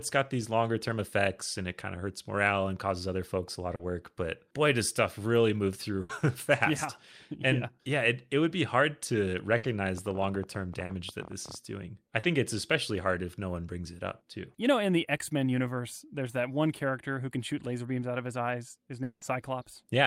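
At 3.75 s a short concealed packet loss occurs: about 40 ms of audio arrived too late, and the receiver patched it by extending the preceding sound, leaving a brief smear. The same happens at 10.85 and 12.19 s. At 6.01 s a burst of packet loss drops about 80 ms, and at 9.57 s another drops about 60 ms. The decoder stretches the last sound into a fading buzz or hiss before the audio resumes further on. From 9.98 to 11.56 s a train of clicks, likely interference or a faulty connection, puts roughly 30 uneven pops over the sound, about 15 per second, peaking about 5 dB above it. At 19.03 s what is likely a long network dropout removes about 180 ms. The concealment fades and ends in about 60 ms of silence before the audio returns.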